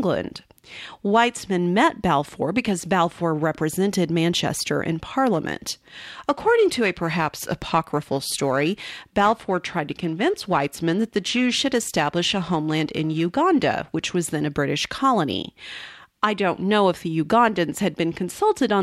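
From 5.33 to 13.33 s, periodic clock jitter near 1 kHz puts sidebands around the speech, a metallic roughness that, unlike noise, disappears in pauses, starting just before "which was then a".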